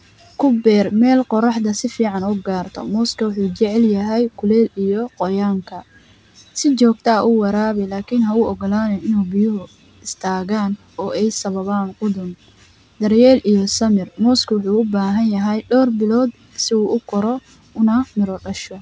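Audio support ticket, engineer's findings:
No faults found in speech.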